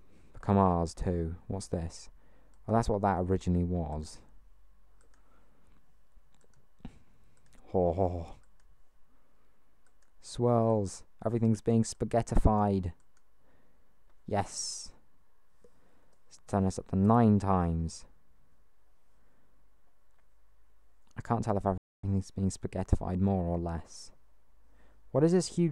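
A playback stall cuts the audio at 21.78 s, leaving about 0.26 s of silence before sound returns at 22.04 s. The output simply drops out in mid-flow rather than fading or glitching, and then carries on. That behaviour points to the player likely running short of data or having its audio thread blocked, so nothing reached the output until the buffer refilled or the thread was scheduled again.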